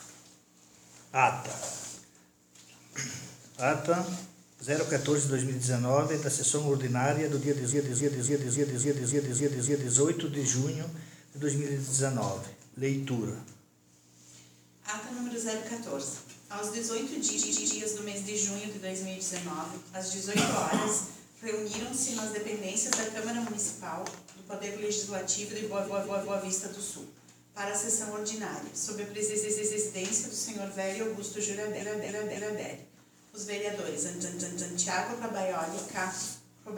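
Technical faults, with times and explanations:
7.69–9.92 s, 17.35–17.77 s, 25.85–26.40 s, 29.28–29.84 s, 31.79–32.63 s and 34.21–34.76 s: repeated frames. A 139–279 ms block replays three to eight extra times, stuttering. Unlike a dropout, nothing goes missing; the audio just gets longer.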